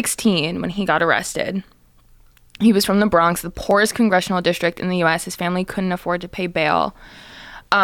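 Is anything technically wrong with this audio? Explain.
Yes. From 1.76 s to 7.64 s the speech carries a regular click, about four in all, spaced 1.96 s apart. These are likely clock drift buffer slips. Two devices running on separate clocks, roughly 400 ppm apart, let the buffer between them slowly fill or drain. Each time it overflows or runs dry, a block of around 30 samples is dropped or repeated. The resulting discontinuity in the waveform is heard as a short tick or pop over the signal.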